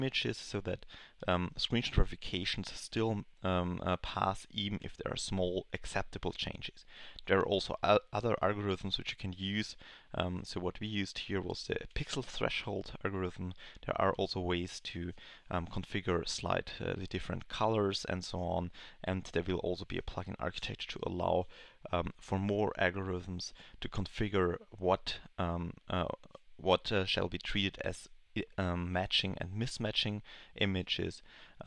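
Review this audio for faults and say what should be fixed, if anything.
No faults turned up in this review, so there is nothing that needs to be fixed.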